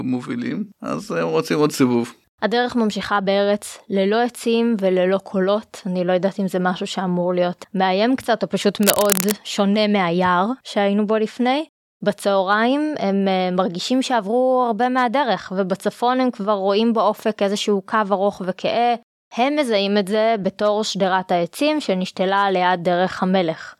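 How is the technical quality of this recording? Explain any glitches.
There's one clear glitch in this speech recording: from 8.83 to 9.33 s, a burst of cable scratch noise, rough, uneven crackling nearly as loud as the voice, most likely a worn cable or connector being moved.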